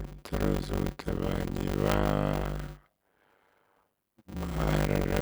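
Block size mismatch (padded) runs throughout: zero-filled gaps in every block cause a 100 Hz buzz and slow the speech to 0.533 speed, timbre unchanged.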